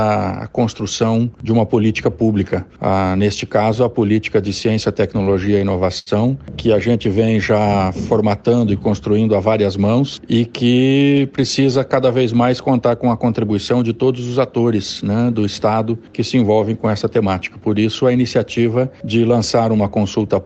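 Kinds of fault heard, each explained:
Repeated stalls (stutter): between 5.23 and 6.09 s the packets arrive too late for playback, so the jitter buffer runs dry seven times and the receiver stretches the last sound to bridge each wait, about 169 ms in total and roughly a fifth of that stretch, the longest gap 77 ms. Nothing is lost, but the sound drags and hiccups. A spectrogram shows brief smeared, repeated frames below the call path's 8 kHz ceiling, and the waveform shows small fading copies.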